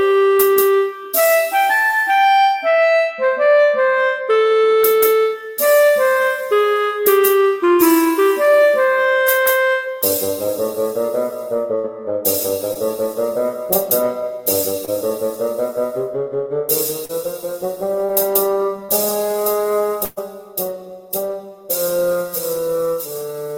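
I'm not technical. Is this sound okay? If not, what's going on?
No. In two places the sound briefly freezes into a held, fading tone or hiss and then jumps ahead: from 11.75 to 11.86 s, and from 20.05 to 20.19 s, where it also drops out to silence for a moment before returning. This is a burst of packet loss. Several pieces of the audio stream in a row were lost or arrived too late to play, so the receiver stretched out the last bit of sound and faded it. About a tenth of a second of the real audio is missing each time.

There are also five much shorter glitches at 12.74, 14.85, 17.05, 18.05 and 18.85 s. Each is a quick smear or wobble, and a tiny bit of sound may seem to vanish. These are short concealed packet losses. Only a sliver of the stream went missing each time, between two and four hundredths of a second, and the receiver patched the hole by continuing the previous sound and blending back into the real audio.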